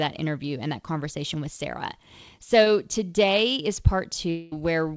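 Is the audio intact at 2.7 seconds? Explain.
No. Just before that point, from 2.64 to 2.68 s, there is short concealed packet loss. About 20 ms of audio arrived too late. The receiver filled the gap by extending the preceding sound, as pitched or shaped noise, then blended back. It sounds like a brief smear.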